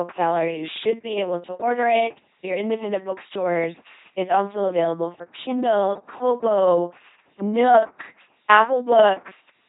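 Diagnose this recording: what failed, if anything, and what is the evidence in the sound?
LPC-10 vocoder, throughout the speech, at the codec stage. The whole clip has the buzzing, mechanical robot quality of a pulse-or-noise excitation driving a short all-pole vocal tract filter, with nothing above 3.9 kHz. Each instant is rendered as either fully voiced buzz or fully unvoiced hiss, so natural breathiness and mixed sounds collapse. The damage is heavy, which fits an LPC-10 coder at about 2.4 kbit/s.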